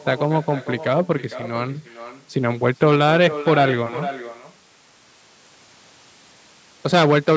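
Echo with no canceller: the far end's loudspeaker feeds back into its microphone unremoved, so throughout, every phrase returns about half a second later, about 14 dB quieter and thin.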